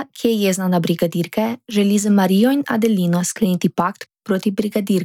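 No technical faults are audible anywhere in the speech.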